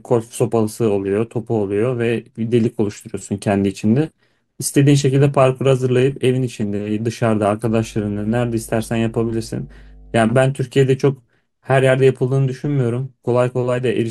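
From 7.66 to 10.45 s there's mains hum, a steady 50 Hz drone from a ground loop or nearby transformer, sitting well below the speech.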